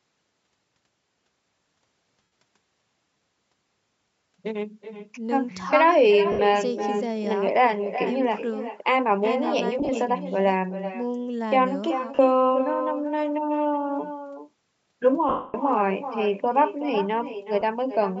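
Throughout the speech there is echo with no canceller: the far end's loudspeaker feeds its microphone, returning a thinner copy of every phrase around 400 ms later and about 9 dB below the direct speech, so each phrase is audibly shadowed.

Lost LE Audio frames occur at 2.24 s (90 ms), 6.32–6.39 s (70 ms), 9.79–9.89 s (short gaps spread over 100 ms, the longest run about 20 ms), 12.15–12.19 s (40 ms), 15.29–15.54 s (250 ms) and 17.61 s (10 ms). The LC3 decoder repeats the last spectrum with random signs, smearing tones into noise, and the long 15.29 s loss fades away toward silence.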